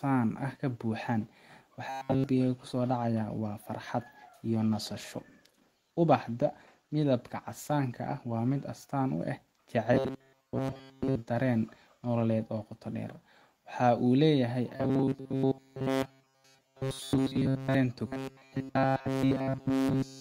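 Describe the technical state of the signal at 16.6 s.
At 16.6 s the speech sits inside robotic sound from repeated short buffers, spanning 14.76 to 17.75 s. All the audio is repeated, imposing a fixed 134 Hz metallic buzz, likely a 7.5 ms buffer looped while fresh audio is skipped. Unlike a dropout, nothing goes silent.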